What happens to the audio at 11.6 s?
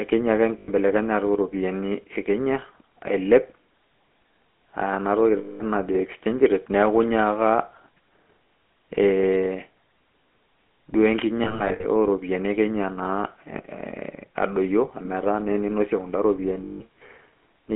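At 11.6 s the decoder is losing GSM frames. Between 11.44 and 11.85 s, about 180 ms of frames are bad, scattered across roughly 360 ms in runs of up to about 70 ms, which fits around nine 20 ms frames. For each gap, the decoder repeats the last good frame's vocal-tract and pulse settings, so the sound is briefly held and smeared into a rough, metallic ring instead of continuing.

Underneath, the whole passage runs through the GSM full-rate codec, which points to the 13 kbps first-generation GSM coder. It rebuilds the vocal tract driven by regularly spaced pulses and keeps only part of the excitation. The line band runs from 200 Hz to 3.4 kHz, so the speech is thin, and it carries a plainly audible buzzy, gravelly roughness.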